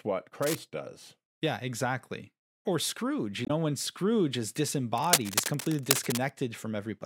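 At 0.42 to 0.59 s, dense, uneven scratching and rustling rides over the speech, a little below its level. This is cable scratch noise, likely from a worn cable or connector being moved so its contact resistance flickers. The speech underneath carries on intact, unlike a dropout.

At 3.45 to 3.51 s comes a brief glitch. This is damaged data in a compressed stream: the decoder misread corrupted frames and lost sync until it found the next frame header.

From 4.97 to 6.30 s, the same scratching returns for longer, about as loud as the speech itself.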